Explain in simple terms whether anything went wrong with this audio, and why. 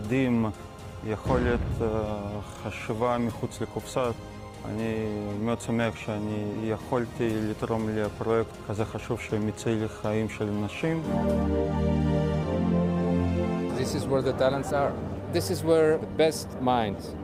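Nothing went wrong here: the signal holds steady throughout, with no breaks, glitches or sudden changes anywhere along the way.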